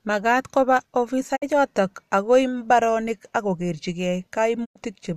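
Speech with two digital broadcast dropouts, at 1.35 to 1.44 s and 4.64 to 4.77 s. Each time, the sound fades out over 20 ms into silence, which fits the receiver muting over about two and then four lost frames. It resumes with material missing rather than resuming where it stopped, unlike a pause.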